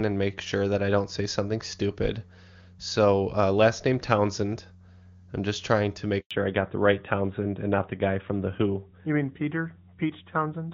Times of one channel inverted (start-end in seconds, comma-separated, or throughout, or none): none